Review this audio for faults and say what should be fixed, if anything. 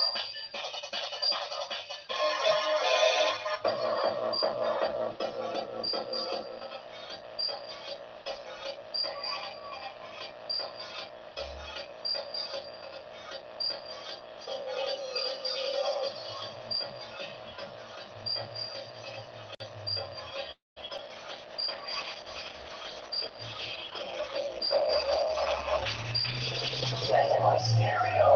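A call audio freeze runs from 20.51 to 20.78 s. The sound trails off and then goes silent for about 0.17 s, adding 0.25 s of delay. The likely cause is delayed packets emptying the jitter buffer. Unlike packet loss, nothing is missing afterwards. A larger adaptive jitter buffer would prevent it.

Short concealed packet loss occurs at 20.88 to 20.91 s and 20.97 to 21.00 s. These are brief smears where 40 ms and then 20 ms of audio never arrived and were patched over. Unlike a freeze, audio is actually lost here. Forward error correction or redundancy would prevent it.

A call bitrate drop runs from 21.05 s to the end. The bitrate falls from 32 to 13 kbps and stays at the lowest rate for about 6 s, so the sound turns rough and muffled. This dulling comes from the encoder cutting off the high frequencies at the low rate, on top of coarser coding. More stable network bandwidth or a higher minimum bitrate would prevent it.

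A jitter buffer speed-up runs from 23.09 to 24.03 s. Playback runs at 107% while keeping the same pitch, with roughly 70 ms trimmed away. Unlike resampling, the pitch does not rise. Gentler buffer-delay reduction would prevent it.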